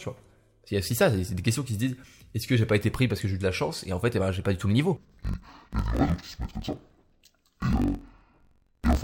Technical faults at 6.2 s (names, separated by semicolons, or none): interleaved audio read as planar